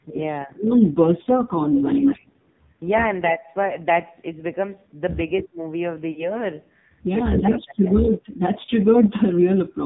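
It's a speech clip squeezed through the AMR narrowband mobile codec the whole way. Nothing above 4 kHz survives, and the voice has that heavy buzzy, synthetic edge that fits one of the low AMR modes, around 5.9 kbps. Lost AMR speech frames show up twice. A quick 20 ms dropout around 1.24 to 1.27 s gives a brief dip. A longer 40 ms gap from 6.12 to 6.31 s gets smeared out as the decoder keeps reusing its last pitch and vocal tract settings with falling gain, and the speech comes back a little rough. Then from 7.93 to 8.10 s there's a faint delayed copy of the voice about 315 ms behind and roughly 20 dB down. That's likely an echo leak, where the far end's loudspeaker sound wasn't fully cancelled before going back down the line.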